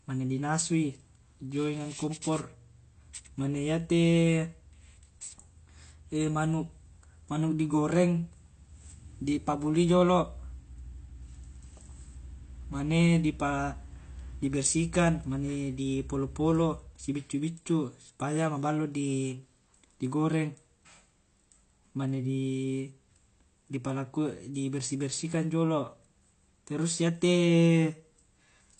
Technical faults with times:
0.00-28.79 AAC compression

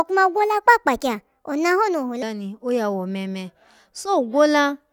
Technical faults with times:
0.00-2.23 section at the wrong speed

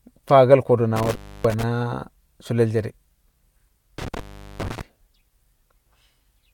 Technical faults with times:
0.96-1.63 intermittent contact
3.98-4.81 intermittent contact

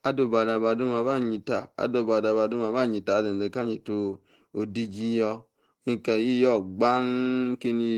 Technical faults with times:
0.00-7.97 Opus voice compression

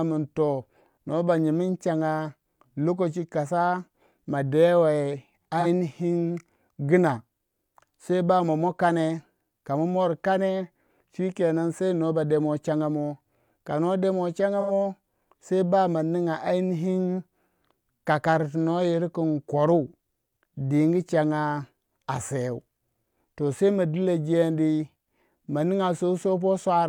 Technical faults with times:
5.59-5.66 AAC frame loss with concealment
14.60-14.71 AAC frame loss with concealment

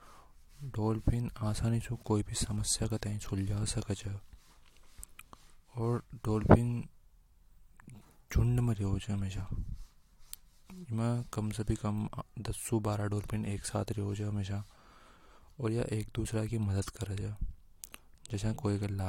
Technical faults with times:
none

